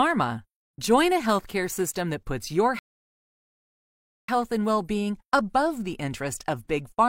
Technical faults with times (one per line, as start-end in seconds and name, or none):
2.79-4.28 rebuffering stall